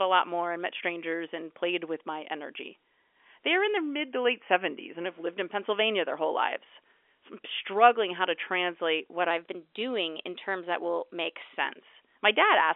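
Speech over a narrowband telephone line: from 3.77 to 5.06 s it slows by 5.74% and drops about a semitone, then snaps back; from 9.31 to 11.57 s it speeds up 5.74% and rises about a semitone. These are likely drift correction steps, a clock-matching resampler abruptly changing playback rate to drain or refill its buffer.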